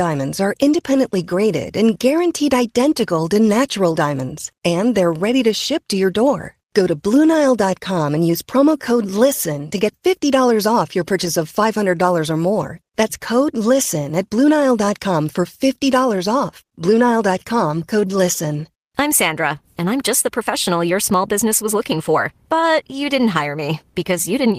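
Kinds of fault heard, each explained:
Lost packet rebuilt from error correction: At 11.25 s, one 20 ms stretch turns briefly rough and noisy without any gap, as a low-bitrate backup copy replaces the missing packet.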